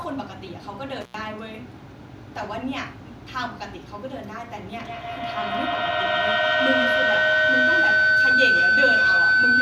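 An intermittent contact drops this speech clip out between 1.01 and 1.14 s. A loose plug or cable briefly opens the line for about 90 ms, so the sound cuts away with crackle at each edge and faint hiss remains while the connection is broken. It then snaps back as the contact closes again. A feedback howl starts at 4.77 s and runs to the end of the clip. Two devices in the same room are on the call, and the loop from microphone to loudspeaker and back gains level each time around. The repeats, roughly every 150 ms, build rather than decay, narrowing to a tone around 1.5 kHz. It peaks about 11 dB above the speech and never breaks.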